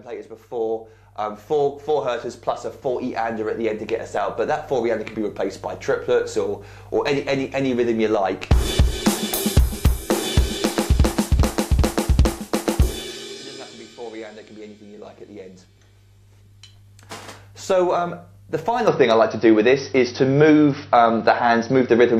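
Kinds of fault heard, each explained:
Input switched to a poorer device: From 18.87 s the sound turns dull and boxy, with nothing above 5.9 kHz. No gap marks the change. The level shifts by about 5 dB, and faint new noise appears. The likely cause is a poorer microphone or headset profile taking over.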